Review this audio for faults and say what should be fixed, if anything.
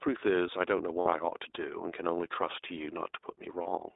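The whole recording carries the iLBC codec. The speech is confined to roughly 300 Hz to 3.7 kHz, with a rough, slightly synthetic texture from frame-by-frame excitation coding, which fits the 15.2 kbps mode. That band-limited graininess sets it apart from wideband codec smearing. Capturing or transmitting with a wideband codec would avoid it.

Lost iLBC frames occur at 1.00–1.08 s (60 ms, which fits three 20 ms frames) and 3.62–3.68 s (40 ms). The decoder fills each gap by repeating the last pitch cycle with added noise, giving a brief held, buzzy vowel. Unlike a dropout, nothing goes silent, and the speech recovers cleanly right afterwards. A larger jitter buffer or packet redundancy on the network path would prevent it.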